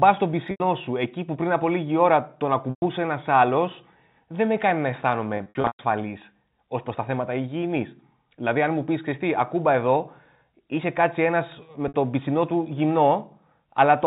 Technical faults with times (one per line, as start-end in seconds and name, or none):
0.51-0.60 packet loss with pitch repetition
2.70-2.82 packet loss with pitch repetition
5.37-5.79 packet loss with pitch repetition
11.88-11.94 packet loss with pitch repetition